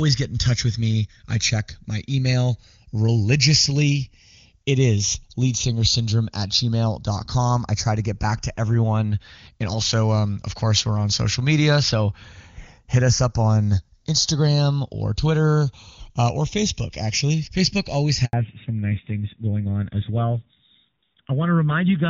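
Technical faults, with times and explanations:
Throughout: channels drifting apart. The two channels were captured on devices whose clocks disagree by roughly 50 parts per million, so the delay between them creeps upward over the clip, reaching somewhere under a millisecond by the end. When the channels are summed to mono, that changing offset produces comb-filter notches that slide slowly through the spectrum, heard as a slow, gradual flanging on the speech.
18.25 to 18.33 s: handover gap. The call was switched from one network to another, and no speech frames arrived while the link changed over. The sound fades out within a few tens of milliseconds and stays silent for 80 ms until the new connection picks up. Whatever was said during that stretch is simply missing.
18.33 s to the end: fallback to narrowband. After the handover the call dropped from AMR-WB at 23.85 kbit/s, the HD Voice codec, to AMR-NB at 7.4 kbit/s. 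Because narrowband coding carries nothing above 4 kHz, the upper band disappears abruptly. The speech turns duller and more muffled, and the lower bitrate adds a rougher, grainier texture that the wideband portion before the switch lacked.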